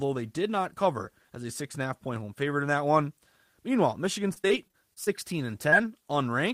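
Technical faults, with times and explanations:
4.33–5.09 s, repeated packet loss (robotic sound): Over this stretch of speech, seven short holes open in quick succession, the longest about 30 ms, with roughly 150 ms in total rebuilt by stretching the preceding sound. Around a fifth of the span is concealed rather than real, so the voice turns choppy. Unlike a single concealed loss, the patches arrive one after another, and the repeated smoothing yields a sustained robotic texture rather than one isolated blip.
5.70–5.74 s, short concealed packet loss: About 20 ms of audio failed to arrive in time, and the receiver bridged the hole by continuing the last sound before blending back into the real signal. The result is a brief smear or wobble lasting a fraction of a syllable. What separates it from the earlier robotic stretch is its isolation: one gap, with no neighbours close enough to build the choppy, stuttering quality heard before it.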